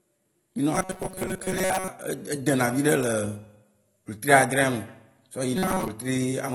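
Speech whose whole length is dull and swirly, with plainly audible smearing, most likely AAC compression at a low bitrate around 32 kbps; the band-limited fizz, rather than clicks or dropouts, marks it as codec damage. From 0.75 to 1.90 s and again from 5.56 to 5.88 s, robotic sound, likely from repeated short buffers, turns the speech into a fixed 188 Hz metallic buzz that loosely tracks the talking. Each repeat lasts about 5.3 ms and replaces most of the real audio. The buzz stays at one pitch instead of following the speaker's intonation, which separates it from a pitch-shifting effect.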